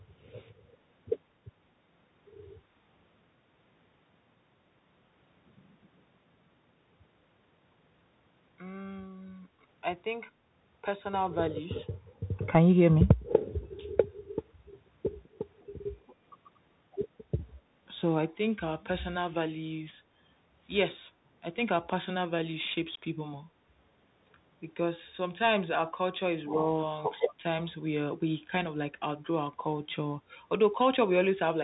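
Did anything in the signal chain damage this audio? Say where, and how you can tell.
Yes. At the codec stage, the whole clip has gone through a Bluetooth CVSD headset codec. Nothing sounds above 4 kHz, s sounds are scratchy, and a granular hiss sits under the speech. This fits a 64 kbps one-bit delta modulator whose adaptive step cannot keep up with loud high-frequency content.

At the call processing stage, an echo leak appears from 15.6 to 15.66 s. It is a very faint copy of the speech that arrives about 204 ms late. The likely cause is a far-end loudspeaker whose echo canceller left a fragment of its microphone pickup behind, which was sent back.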